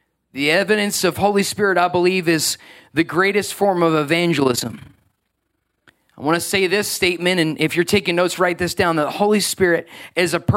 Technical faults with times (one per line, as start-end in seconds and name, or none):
4.40-5.86 overlap-add ripple